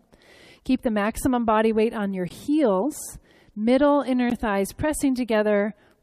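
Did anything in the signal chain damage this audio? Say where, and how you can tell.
Yes. There is a gap between stream segments at the playback stage: hard-edged silences of about 17 ms at 2.29 s and 14 ms at 4.30 s, 2 s apart, matching the segment length. The waveform drops flat to silence, leaving a blank vertical stripe on the spectrogram. Mismatched timestamps leave a hole filled with silence, but no audio is lost.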